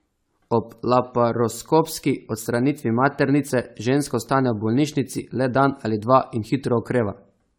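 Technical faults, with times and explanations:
Throughout, generation loss: the speech sounds swirly, hollow and smeared, with blurred consonant attacks, likely from around ten successive AAC-LC re-encodes at a rate that fits 96 kbit/s. A spectrogram shows scattered spectral holes, smeared transients and nothing above 19.6 kHz.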